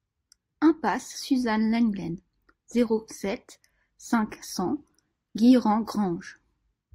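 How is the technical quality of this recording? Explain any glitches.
The recording has no technical glitches. Nothing interrupts or disturbs the speech at any point.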